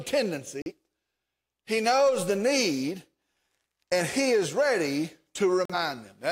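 The speech briefly cuts to silence at 0.62 to 0.72 s, and again at 5.65 to 5.75 s, just after "and he is ready": a digital broadcast dropout, where the receiver muted on failed frames, each gap consistent with one lost 43 ms frame.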